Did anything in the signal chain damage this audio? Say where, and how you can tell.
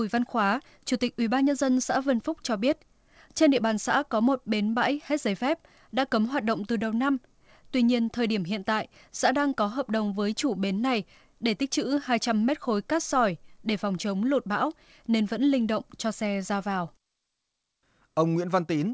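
No, nothing in the chain stood out as damaging this speech on listening, with the call path's band limit at 8 kHz sounding as that path normally does.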